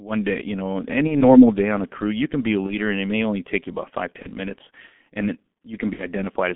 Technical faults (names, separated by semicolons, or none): G.723.1 codec; VoIP packet loss concealed by the speech codec